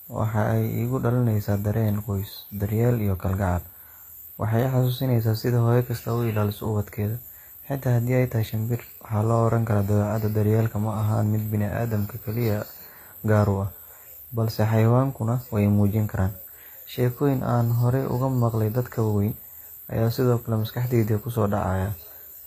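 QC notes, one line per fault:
Throughout: likely HE-AAC compression. The speech keeps bright treble up to a hard ceiling near 14.9 kHz, but s sounds turn gritty and lispy because that top band is rebuilt from lower bands. Unlike plain band-limiting, the treble sounds synthetic, not dull, which fits about 24 kbps.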